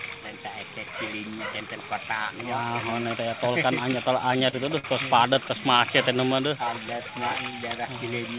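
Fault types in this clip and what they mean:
Short stall from a late packet: at 4.50–4.55 s and 4.79–4.86 s, late packets emptied the jitter buffer, so the last sound is held 31 and 51 ms, with nothing lost.
Repeated stalls (stutter): from 5.34 to 5.80 s the buffer ran dry four times, each gap up to 16 ms bridged by stretching sound, so playback drags and stutters.
Jitter buffer slow-down: from 6.17 to 7.60 s the receiver repeated pitch periods to rebuild its reserve, adding 149 ms and running at 90% speed, same pitch.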